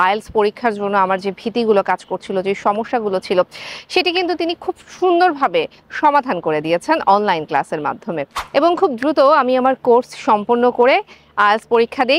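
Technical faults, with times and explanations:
Nothing here jumps out as a technical problem; it all comes across just fine to the ear.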